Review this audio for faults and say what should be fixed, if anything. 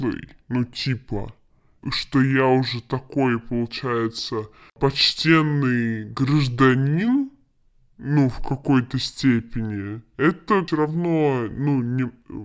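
Wrong sample rate throughout: the speech plays at 0.73 times normal speed and about 5.5 semitones low, which fits 22 kHz audio played at 16 kHz unconverted. Unlike a pitch shift, tempo and pitch fall together. Resample to the playback rate or tag the file correctly.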